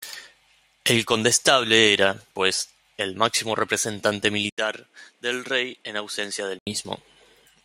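At 4.50 s an 80 ms gap, then quieter speech with nothing above 12.1 kHz until 6.67 s, likely an input switched to a poorer device.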